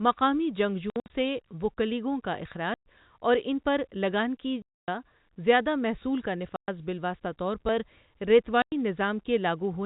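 At 0.9 to 1.1 s the speech breaks into scattered silent gaps, the longest about 60 ms, followed by clean holes at 2.74 to 2.85 s, 4.62 to 4.88 s, 6.56 to 6.68 s and 8.62 to 8.72 s. This is packet loss filled with silence: missing packets were replaced by nothing, so each hole is a whole number of packets, consistent with 20 ms packets, and its edges are abrupt against the band-limited G.711 telephone sound.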